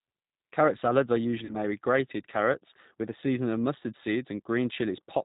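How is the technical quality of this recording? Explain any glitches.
The recording has clear technical flaws: plainly audible low-bitrate speech coding throughout and one brief dropout.

Throughout, the speech carries plainly audible G.729 codec damage. It sounds band-limited, with nothing above 4 kHz, and slightly rough and synthetic, which fits an 8 kbit/s G.729A stream. The decoder rebuilds the speech from a vocal tract filter, a pitch predictor and a few pulses per frame, not from the waveform itself.

From 1.45 to 1.56 s there is VoIP packet loss concealed by the speech codec. About 40 ms of audio went missing, consistent with two lost packets. The decoder extended its last pitch and filter at falling gain, producing a fading smear, and the sound stays weak briefly afterward.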